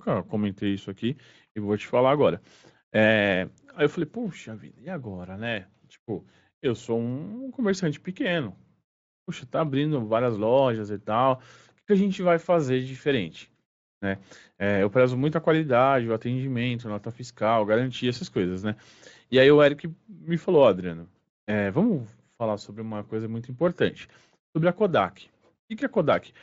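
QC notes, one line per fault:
No faults heard anywhere in this speech recording.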